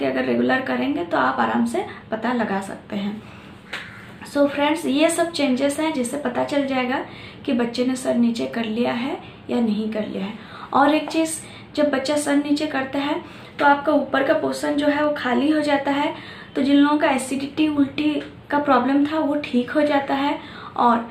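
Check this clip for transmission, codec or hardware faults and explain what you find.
There is one fault, present throughout: clock slip clicks from 0.2 s to 21.08 s. Two devices are likely running on unsynchronised clocks, roughly 200 ppm apart, so one sample is dropped or repeated about every tenth of a second, giving a faint, steady ticking across the sound.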